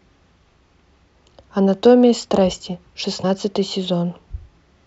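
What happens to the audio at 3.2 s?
At 3.23 s the speech hits damaged data in a compressed stream: corrupted frames make the decoder lose sync and resynchronise, giving a brief glitch.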